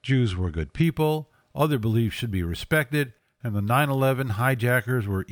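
From 0.84 s, after "were good", imaging from sample-and-hold upsampling adds a metallic fizz about 27 dB down between 12 and 24 kHz. It fits unfiltered doubling from 24 kHz to 48 kHz, and unlike aliasing its mirror copies sit above the original band rather than folding down into it.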